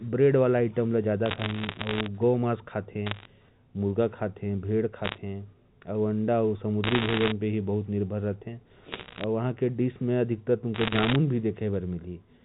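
Speech over a G.711 A-law phone path, and it has bit errors on a digital phone line in six bursts: 1.26–2.06, 3.06–3.25, 5.04–5.18, 6.84–7.32, 8.92–9.24 and 10.74–11.16 s. Flipped bits corrupt single samples, so you get sharp ticks and crackle over the speech, with roughly one to one and a half percent of bits hit.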